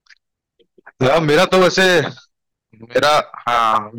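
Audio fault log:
1.02–2.00 s and 2.96–3.78 s, hard clipping: speech drove the signal about 11 dB and 10 dB past the stage's limit, flattening peaks into harsh fuzz on loud sounds.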